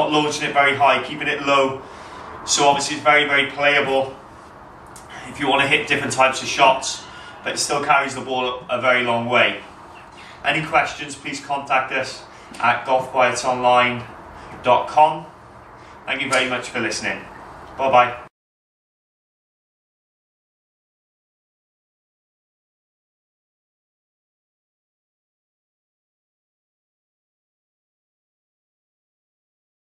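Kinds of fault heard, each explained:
No faults of any kind can be heard here.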